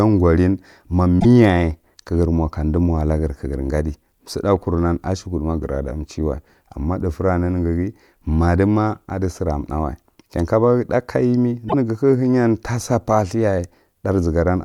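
A speech recording carries two brief glitches, at 1.17 to 1.25 s and 11.65 to 11.74 s, each lasting about 90 ms. Both come from damaged data in a compressed stream: corrupted bytes made the decoder misread frames and lose sync until it found the next valid frame header.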